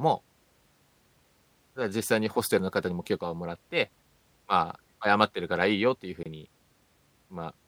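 A gap at a join of encoded pieces opens in this speech clip from 6.23 to 6.26 s, a silence of about 26 ms with smeared edges. Separately encoded segments were joined untrimmed, leaving encoder delay and last-frame padding before the sound resumes where it stopped.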